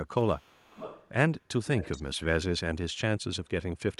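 From 0.17 to 1.09 s and 1.65 to 2.16 s, echo leak: a faint copy of the speech trails 430 ms behind, about 20 dB down. It is a distinct delayed repeat, not a reverb smear, likely from an echo canceller missing loudspeaker pickup.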